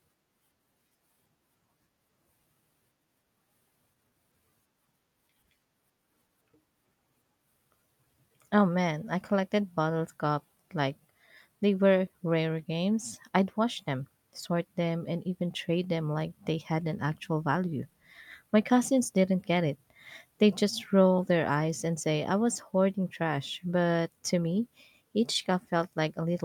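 No technical faults can be heard anywhere in this speech recording. There is nothing in it that needs a timestamp or a fix.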